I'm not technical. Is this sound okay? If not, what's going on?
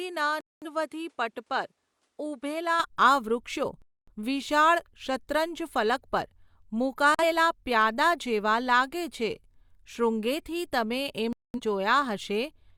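No. Two things are going on.

Input switched to a poorer device, from the start until 2.80 s: the first stretch sounds duller and a little quieter, with a faint background hiss, and nothing above about 11.8 kHz. Right at 2.80 s, just before "આ વૃક્ષો", it clears up with no gap. The likely cause is that the recording began on a lesser microphone or headset and then switched to a better one.

Digital broadcast dropout, four times: 0.41 to 0.67 s, 3.82 to 4.13 s just after "આ વૃક્ષો", 7.15 to 7.23 s, and 11.33 to 11.60 s just after "શૃંગેથી તમે". Each time the sound goes silent for between about 40 milliseconds and a quarter of a second. The receiver lost usable signal and muted until good data returned, so whatever was said in those holes is gone.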